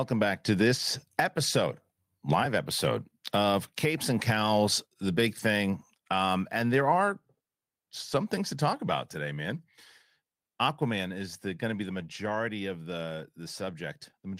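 Speech clip with one lost packet rebuilt from error correction at about 5.39 s, right after "the big". There's no dropout, but you get a brief rough, noisy patch around 20 ms long, which fits a single packet the decoder patched using the low-bitrate copy carried in the next one.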